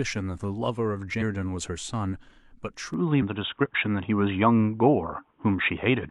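A brief glitch at 1.17 to 1.22 s comes from damaged data in a compressed stream, where the decoder misreads corrupted frames, loses sync and skips ahead to the next frame header. From 2.94 s to the end, the audio abruptly turns dull and boxy, with nothing above 3.8 kHz, a level shift of about 5 dB, faint new background noise and no gap at the change, most likely because the input switched to a poorer device. The same damaged-data glitch recurs at 3.18 to 3.22 s and 5.14 to 5.20 s.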